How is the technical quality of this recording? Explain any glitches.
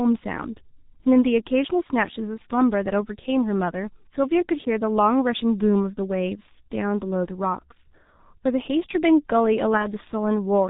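Technical quality is poor. The speech has heavy coding damage throughout, and there is one short dropout near the end.

The G.723.1 codec affects the whole recording. This early internet-telephony codec runs here at 6.3 kbit/s. It cuts everything above 4 kHz, so the speech sounds muffled. It works in 30 ms frames and updates its model of the voice slowly, so fast changes get smeared. Consonants blur together. The voice takes on a hoarse, rough texture.

VoIP packet loss concealed by the speech codec occurs from 9.77 to 9.86 s. About 30 ms of audio went missing, which fits a single lost frame. The decoder filled the gap by repeating its last pitch and spectral shape at falling gain. That produces a brief stretched sound, a buzzy tone or coloured noise that fades. Because each frame builds on the one before, the voice stays weak or distorted slightly past the gap before it recovers.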